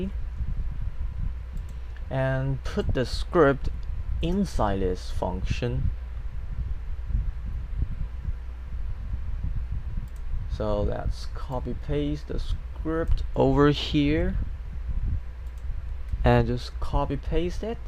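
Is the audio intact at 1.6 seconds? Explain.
Yes, at 1.6 seconds the sound plays through cleanly, with no dropout, glitch or other fault at that moment.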